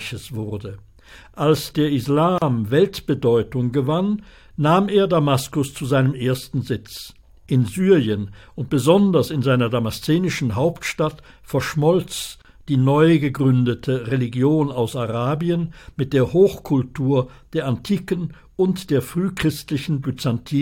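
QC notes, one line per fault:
2.38–2.42 s and 12.42–12.45 s: gap at a join of encoded pieces. Separately encoded segments, joined every 10 s, kept each encoder's start delay and final-frame padding, so silences of 35 ms and 31 ms open in continuous sound with smeared edges before it resumes where it stopped.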